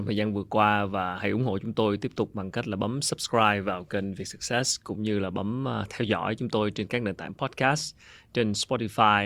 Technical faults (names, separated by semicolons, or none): sample clock jitter